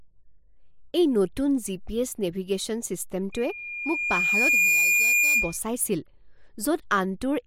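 From 3.32 s to 5.58 s, loudspeaker feedback squeal: a pure 2.4 kHz tone swells over roughly one and a half seconds to sit a few dB above the speech. A spectrogram shows a single bright horizontal line thickening, and the waveform's envelope grows steadily.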